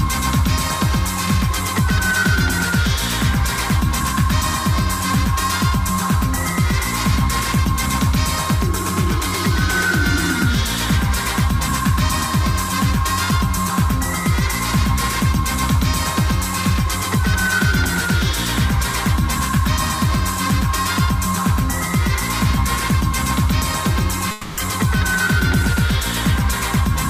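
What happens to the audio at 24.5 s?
Right at 24.5 s you're in the middle of a long network dropout, running from about 24.31 to 24.59 s. The sound gets stretched into a buzzy, hissy continuation that fades out, covering roughly 260 ms with no true silence. What's likely happening is that packets stopped arriving, so the receiver padded over the hole by extending the last bit it had. When real audio returns, that quarter-second or so is simply gone, so it picks up later with a jump.

On top of that, the doubled audio track that runs through the whole clip is still there at this point. A second, full-band copy trails the original by around 150 ms at about the same level, with no decay or room colour, so everything gets a hard, slap-like echo. The likely cause is the audio being captured twice, with one path running slower, or an edit that left two out-of-step copies stacked together.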